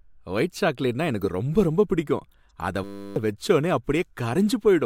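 Speech, with two kinds of fault. The first is a corrupt frame decoded, heard at 1.21 to 1.30 s as a glitch peaking at around -20 dBFS, and again at 2.50 s as a faint glitch at around -55 dBFS. In each case flipped bits in the compressed stream were decoded as if valid, so misread gains and codes put energy at the wrong frequencies for the duration of the damaged frames: a handful at the first spot, a few at the second.

The second is a system hang loop from 2.84 to 3.16 s. The audio is replaced by a steady buzz at 100 Hz, made by a single 10 ms piece of sound repeating exactly about 32 times. While the host or driver was frozen, the sound hardware kept cycling through the same short ring buffer, so the repeat rate sets the buzz pitch. Roughly a third of a second of the original speech is lost in that gap.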